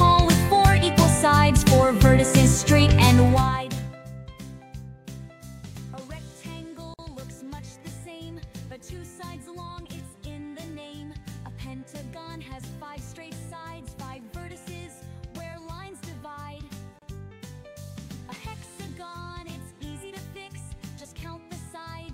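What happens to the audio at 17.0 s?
A gap at a join of encoded pieces opens from 16.99 to 17.02 s: about 31 ms of silence where separately encoded segments, joined every 10 s, kept their encoder delay and end padding. On a waveform it shows as a flat notch; on a spectrogram, a thin vertical blank band with smeared edges.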